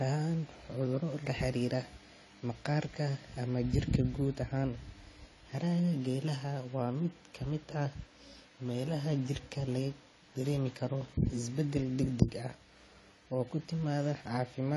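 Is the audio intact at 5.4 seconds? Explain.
No. At 5.4 seconds, as throughout the clip, the speech sounds dull and smeared, with a fizzy, warbling edge on sibilants and nothing above about 11.5 kHz. The likely cause is AAC compression at a low bitrate, around 32 kbps, lowering the cut-off and starving bands of detail.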